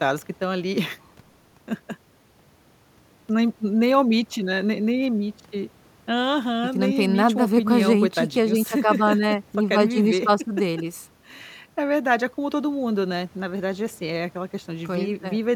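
No technical faults are audible.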